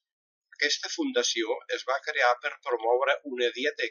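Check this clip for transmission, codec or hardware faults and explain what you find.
No transmission, codec or hardware faults turn up in the speech here: the signal stays continuous and intact throughout, with nothing that points to a problem in how it was carried, encoded or captured.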